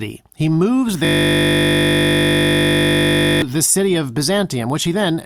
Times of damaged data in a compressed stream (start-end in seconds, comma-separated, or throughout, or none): none